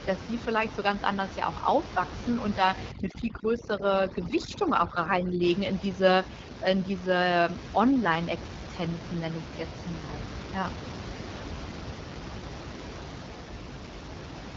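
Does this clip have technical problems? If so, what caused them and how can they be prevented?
Yes. The speech carries AMR wideband (HD Voice) codec damage from start to end. Nothing is heard above 7.3 kHz. The voice sounds rough and raspy throughout. That roughness points to one of the codec's lowest rates, likely around 8.85 kbit/s. At such rates the pulse model has too few bits to shape the voice cleanly. The top band is only filled with shaped noise. Run the call at 12.65 kbit/s or higher to prevent this.

Overdone noise removal hits from 2.91 to 5.43 s. The room noise, about 10 dB below the speech, drops there. Twinkling specks remain in its place. The suppressor was set too strong. It cut bands near its noise estimate hard, and quiet parts of the voice went with them. Use a gentler reduction setting, or none, for this background.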